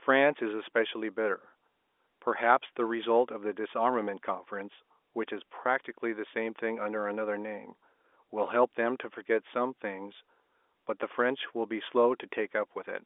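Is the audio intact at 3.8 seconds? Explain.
Yes, the speech at 3.8 seconds is intact, carried as normal G.711 telephone coding with its narrow phone-line band.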